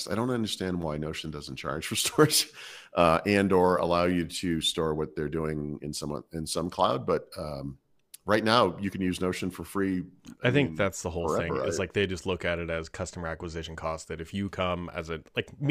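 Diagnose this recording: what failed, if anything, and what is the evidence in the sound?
Nothing in this speech recording points to a failure at any stage, so there's simply no fault to diagnose here.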